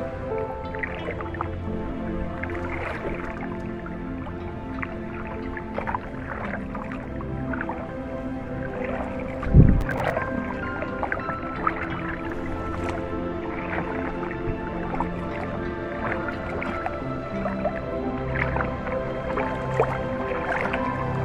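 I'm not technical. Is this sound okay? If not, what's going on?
No. From 9.81 to 10.1 s there's processor overload crackle: the computer fell behind, missed several tiny audio chunks in a row, and replayed stale bits, causing gritty crackling.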